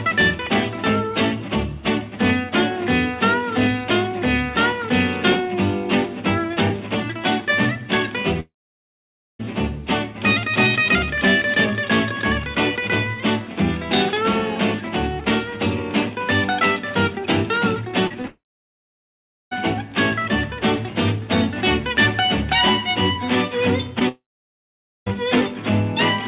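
At 8.4 to 9.41 s the sound smears into a fading buzz, then goes silent for about 0.9 s. This is a long network dropout, likely, with a full second never arriving. The same happens at 18.27 to 19.53 s (1.13 s silent) and 24.09 to 25.08 s (0.86 s silent). Around the later two, short concealed packet loss adds brief wobbles at 18.07 to 18.16 s, 18.22 to 18.25 s and 23.99 to 24.03 s. Lost packets of 20 to 40 ms were patched by extending the preceding sound. Throughout, the band stops at 4 kHz, which fits a G.711 call at 64 kbps.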